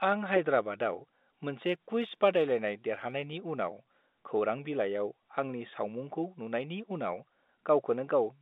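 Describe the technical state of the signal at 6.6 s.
At 6.6 s the speech is intact, carried over the G.711 telephone line with its usual band of roughly 200 Hz to 3.7 kHz and no fault at that moment.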